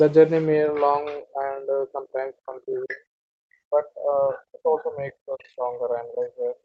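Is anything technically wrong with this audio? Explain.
Yes. The speech is repeatedly pulled down, and faint traces of a second voice slip through.

Speech suppressed in double talk runs from 0.59 to 3.06 s and again from 3.62 to 6.56 s, with about two and then three seconds affected. The voice dips by as much as roughly 25 dB and thins out in stretches. The likely cause is an echo canceller that could not tell this talker from loudspeaker echo while both sides spoke, so it turned everything down.

The other side's voice leaks through at 2.89 to 2.95 s, about 15 dB below the speech, and at 5.39 to 5.49 s, around 30 dB below. Each is a brief scrap of another voice that the echo canceller likely left in the microphone signal. The audio's top end stops at 8 kHz, which fits an Opus call path.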